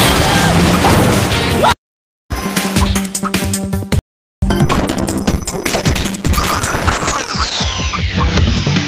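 A playback stall, likely the player running short of data, silences the output from 3.99 to 4.42 s, a gap of about 430 ms before the sound resumes. At 4.66 s a call bitrate drop sets in: the encoder receives far fewer bits, consistent with a fall from around 32 to 8 kbps. High frequencies above 8 kHz vanish, leaving rough, muffled sound until the end.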